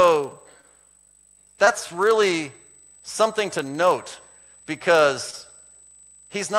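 A thin, steady whine sits on the speech from start to finish, pitched at 8 kHz and loudest at 16 kHz, around 20 dB below the speech. This is USB whine, where the bus's 125-microsecond microframe current leaks in through power or ground.

Underneath runs a low 25 Hz buzz that rises and falls with the speech level. This is a filter restarted on every block: each block begins from silence with a small transient, which fits blocks of 40 ms.

Brief smears interrupt the speech at 0.61 to 0.65 s, 1.65 to 1.68 s and 5.30 to 5.34 s. These are short concealed packet losses: each time about 20 ms never arrived, and the receiver extended the preceding sound for 15, 15 and 20 ms before blending back.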